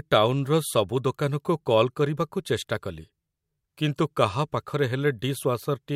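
No technical faults can be heard anywhere in this speech recording.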